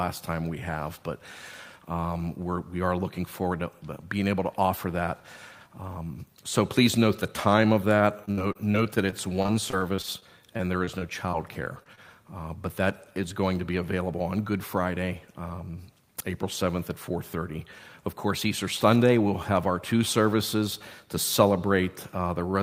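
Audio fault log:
8.25 to 11.35 s: repeated packet loss (robotic sound). The audio turns choppy for about three seconds, with small pieces dropping out again and again. Over this stretch 21 gaps occurred, the longest 59 ms, and each was patched by stretching the last stretch of sound before the next hole arrived. About 14 percent of the span is filled-in material rather than real audio, which gives it that choppy texture.
11.84 s and 11.95 s: short concealed packet loss. Two brief smears follow closely after the choppy run, each a fleeting wobble rather than a clear break. In each case about 20 ms of audio failed to arrive in time, and the receiver covered the hole by extending the preceding sound, as pitch if voiced or shaped noise if not, then blended back into the real signal. The first patch also stretched timing slightly, adding a few milliseconds.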